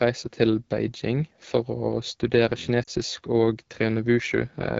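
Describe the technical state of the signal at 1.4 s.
At 1.4 s the speech carries AMR wideband (HD Voice) codec damage, present throughout. The roughly 8.85 kbit/s rate points to a low mode, so the pulse-driven vocal tract model sounds rough and raspy. A spectrogram shows smeared harmonics below 6.4 kHz, with only diffuse noise filling up to 7 kHz.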